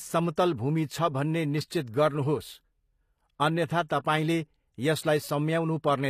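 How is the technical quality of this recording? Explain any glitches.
The technical quality is compromised by audible codec damage across the whole recording. From start to finish, s sounds come out gritty and lisping, with a metallic sheen on the treble, and nothing is present above 14.9 kHz. This is likely HE-AAC compression at a low bitrate, around 24 kbps. The codec stores only the lower spectrum and fills in the treble by copying lower bands upward under a rough envelope, so the rebuilt highs are misaligned with the true harmonics.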